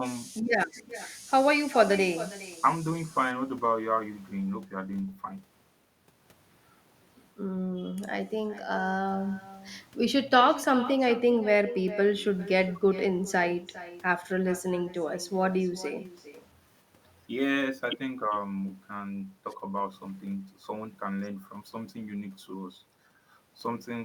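From start to finish there's echo with no canceller: the far end's speaker bleeds into its mic, so every phrase returns around 0.4 s later, thinner and about 16 dB down.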